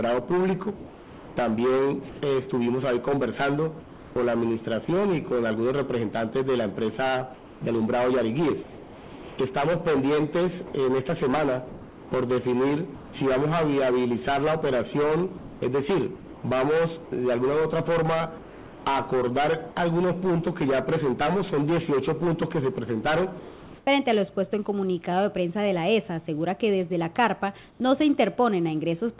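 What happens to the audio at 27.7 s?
Comfort noise in place of the background runs from 27.71 to 27.8 s. For those 90 ms the real background, already about 31 dB below the loud parts, gives way to a steady, featureless hiss about 8 dB quieter. The likely cause is discontinuous transmission: the sender's activity detector paused sending, and the receiver filled the gap with synthetic noise.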